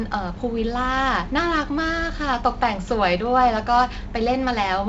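No technical faults can be heard in this speech clip. The G.722 wideband telephone coding at 48 kbit/s is audible as a band limit with nothing above about 7.7 kHz and a light coding texture from the reduced bits.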